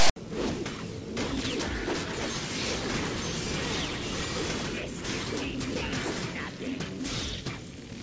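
From 0.0 to 0.16 s the file opens with file tags played as audio. A block of text tag data, followed by zero padding, is decoded as samples. The text gives a loud, hard-edged rasp offset to one side, and the padding drops to silence before the real audio begins.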